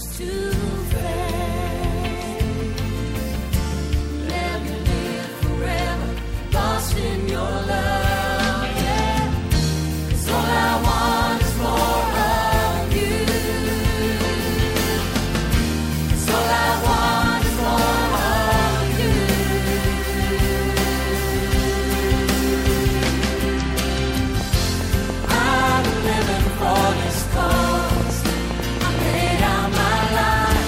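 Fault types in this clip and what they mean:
Train of clicks: from 24.41 to 30.57 s, about 7 same-shaped pulses per second at an uneven pace, some fifty in all, poking out around 10 dB above the sound. Unlike random crackle, the clicks match each other, likely from electrical interference or a faulty connection.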